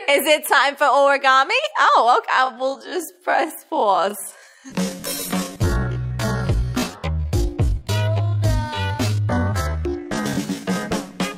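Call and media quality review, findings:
Time-stretched section, 2.28 s to 10.84 s. Abrupt drop in pace at 2.28 s, pitch unchanged. Sound runs at 0.536x speed, close to half. Audio drags throughout. Likely a time-stretch stage in the processing chain. It pads the audio by repeating short overlapping pieces, so it keeps the pitch. Pace snaps back at 10.84 s.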